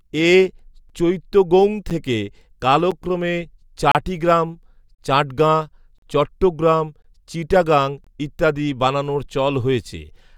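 Speech in the clip is broken by a gap between stream segments: short hard-edged silences at 0.89, 1.90, 2.91, 3.92–3.95, 4.95–4.99, 5.98–6.02, 7.02–7.05 and 8.04–8.07 s, one at each 1 s segment boundary, the first just before "চৈত্তগৌং থেকে". Adjacent segments' timestamps don't meet, so silence fills a hole of about 5 to 38 ms. Unlike a dropout, nothing is lost: speech resumes exactly where it stopped, merely pushed later.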